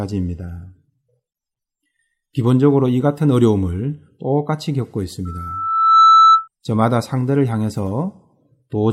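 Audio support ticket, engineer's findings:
Mic-to-loudspeaker loop gain above unity at 1.3 kHz, causing loudspeaker feedback squeal at 5.25–6.48 s. Single tone swells over roughly 0.7 s, ending about 10 dB above speech.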